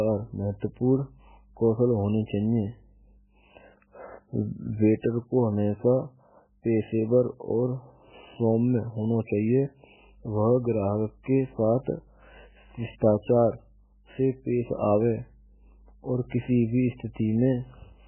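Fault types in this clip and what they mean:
MP3 compression: Heavy damage throughout this speech. Nothing sounds above 3 kHz, and the sound swirls watery. This is likely a very low bitrate, around 8 kbps.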